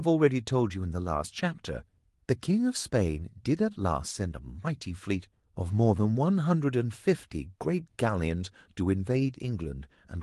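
Nothing in this bit of speech trips anything up; there's just nothing here to flag.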